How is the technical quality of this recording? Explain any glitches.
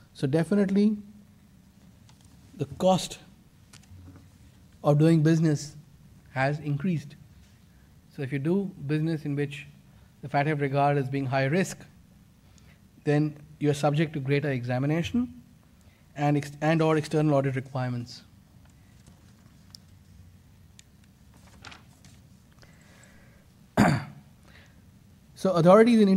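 No technical faults are audible.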